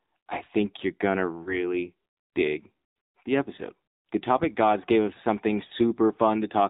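Speech heard through the AMR narrowband mobile codec, with two brief dropouts from lost AMR speech frames. The coding damage is plainly audible throughout. Nothing above 4 kHz survives, so the sound is boxed-in. The vocal tract model, driven by sparse pulses, leaves a buzzy, synthetic edge, which fits a low AMR-NB mode near 7.4 kbps. What separates this from plain telephone band-limiting is that buzz. A simple 4 kHz filter would sound muffled but still natural, not synthetic.

The first dropout follows "think you're going to", from 1.44 to 1.74 s. The second follows "gods gave us something", from 5.68 to 5.72 s. Each sounds like a short dip or warble rather than a hard gap, which points to a single lost 20 ms frame. The decoder filled that frame by repeating the last good pitch and vocal tract settings at falling gain, and the voice comes back weak or rough for a moment. A packet-loss click or a silent gap would sound abrupt instead of this smeared, tonal bridging.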